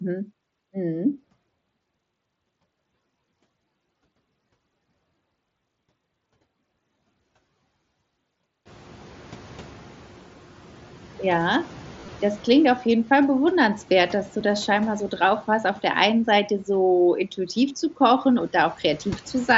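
At 1.82 s there is a barely noticeable hitch, a concealed Bluetooth headset packet loss. About 7.5 ms of audio never arrived from the headset, and the receiver patched the gap by repeating a matching stretch of recent waveform. From 8.65 to 11.18 s the room noise, which jumps by about 24 dB near 8.5 s, comes through with less reduction at first before gradually sinking by about 4 dB. This is the noise suppressor catching up as its noise estimate adapts over roughly 2.5 s. At 12.00 to 12.08 s a short buzzy, tonal patch ends in a slight warble. This is more concealed packet loss: about 52 ms of audio was lost across 75 ms, with the longest run 22.5 ms. Smaller losses follow, a nearly hidden one at 14.40 s and a 15 ms one at 17.69 s.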